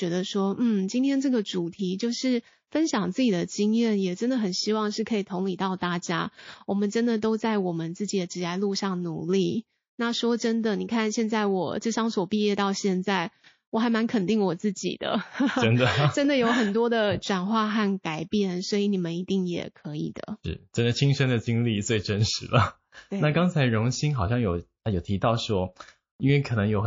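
Throughout the speech, the sound is watery and swirly, with sibilants chirping. Weak detail flickers in and out. The likely cause is heavy MP3 compression, and the damage fits a rate near 32 kbps.

At 2.67 s, a short hiss of about 49 ms precedes an attack. This is pre-echo. The noise rises about 23 dB before the onset. The codec spread noise across a long block, around 72 ms, without switching to short blocks.

At 5.78 s, pre-echo returns, about 31 ms long. The hiss is about 18 dB above the quiet before the attack. The onset sounds soft and smeared, again consistent with long blocks only.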